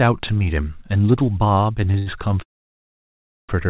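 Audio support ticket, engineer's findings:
Short stall from a late packet, 1.92 to 1.96 s: sound briefly held, slight buzz or dip, about 20 ms stretched. Jitter buffer underrun; receiver extended the last frame until the packet landed, resumed in place, nothing lost.
Short stall from a late packet, 1.98 to 2.08 s: longer hold with slight buzz or dip, about 81 ms stretched. Same jitter buffer underrun mechanism, playout pushed back by the wait, audio intact.

Call audio freeze, 2.42 to 3.51 s: sound stops, brief decaying buzz or hiss, then near-silence for about 1.04 s, roughly 1.06 s of inserted gap. Likely cause: packets held up in transit, jitter buffer drained, concealment faded out. Playback resumes where it stopped, nothing missing. Band ends at 4 kHz throughout, which fits a G.711 mu-law call path at 64 kbps.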